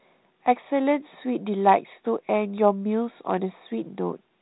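The speech arrives as ordinary telephone-band audio carried by G.726 ADPCM at 32 kbit/s, with nothing above 4 kHz and only the light coding texture expected at that rate, and no faults can be heard in it.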